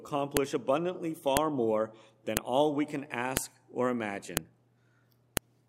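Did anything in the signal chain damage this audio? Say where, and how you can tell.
Yes. At the storage or streaming stage, one-second pieces were joined with their WAV headers left in, so the header bytes play as samples. That gives a sharp, loud click at 0.37, 1.37, 2.37, 3.37, 4.37 and 5.37 s, one per piece regardless of the signal: file header played as audio.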